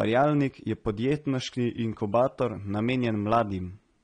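From start to finish the speech sounds dull and smeared, with nothing above 9.7 kHz and clearly audible coding damage. That's likely AAC compression, AAC-LC at a low bitrate that fits about 32 kbps, with the encoder cutting off the top end and coarsening what's left.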